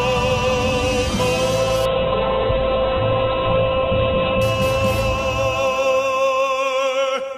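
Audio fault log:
1.87–4.49 s, call bitrate drop: the encoder's budget fell from 48 kbps to 7 kbps, holding at the lowest rate for about 2.56 s, so the audio is coded far more coarsely and its bandwidth narrows from 20 kHz to 4 kHz, turning rough and muffled. Unlike packet loss, nothing goes missing or repeats; the sound runs continuously but degraded. Unlike a fixed filter, it is temporary, clearing by 4.49 s as the bitrate returns.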